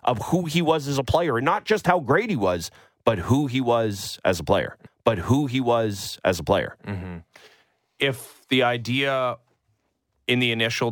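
A stream segment repeated from 4.86 s to 6.85 s: the player fetched or queued the same chunk of the speech twice, so about 2.0 s of programme plays again, with a small blip at the jump back where playback restarts the already-heard segment.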